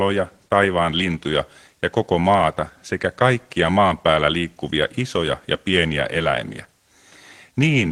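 No technical faults can be heard anywhere in the recording.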